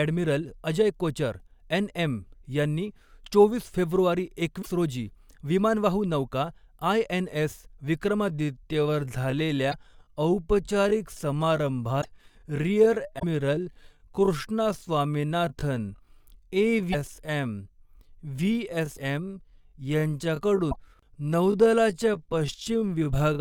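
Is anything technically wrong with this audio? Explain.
Yes, there are two kinds of fault in this speech recording.

A broken MP3 bit reservoir shows up at 4.61–4.67 s, between "चोवीस फेब्रुवारी" and "रोजी विमानवाहू", and again at 9.71–9.74, 12.01–12.05, 13.18–13.23, 16.92–16.95, 18.95–18.98 and 20.70–20.76 s. Each spot is a short lurch forward with a brief chirp, noise burst or hole lasting roughly one or two MP3 frames of 26.1 ms. This is likely caused by frames having been cut out. The next frame then reaches back into the reservoir for borrowed bits and decodes another frame's bytes.

A time-stretched section runs from 8.26 s to the end. There the delivery suddenly slows to about 0.659 times its earlier pace while the pitch stays put, so the speech drags. This is likely the result of software lengthening the audio and holding its pitch by repeating short slices.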